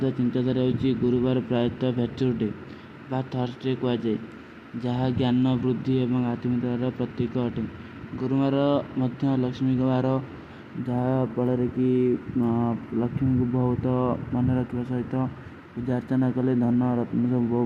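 A speech recording with no audible technical faults at any point in the signal.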